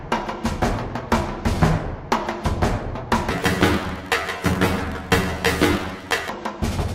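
From 3.31 to 6.29 s, the audio jumps an octave high with a flutter near 47 Hz. This is planar audio read as interleaved. Each 21.33 ms block, which fits 1024-sample blocks, plays its left half then its right at double speed.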